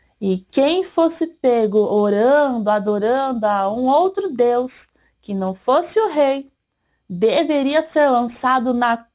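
Aliasing runs through the whole clip: content above 4 kHz folds back as gritty, metallic tones, pointing to an unfiltered drop to an 8 kHz rate. A spectrogram shows energy packed hard against 4 kHz, with the folded components roughly 25 dB below the signal.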